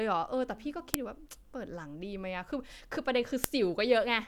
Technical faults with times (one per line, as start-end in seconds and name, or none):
0.94 file header played as audio
3.44 file header played as audio